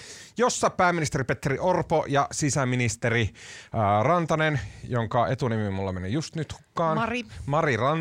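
No technical faults are audible.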